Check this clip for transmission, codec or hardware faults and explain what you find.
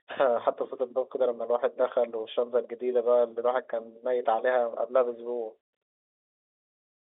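Nothing stood out on listening to this speech, which carries the narrow band and faint level-following hiss of an ordinary G.711 telephone line.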